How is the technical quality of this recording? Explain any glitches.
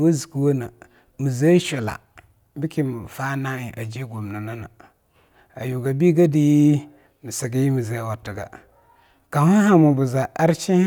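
The recording shows no technical glitches anywhere in the speech.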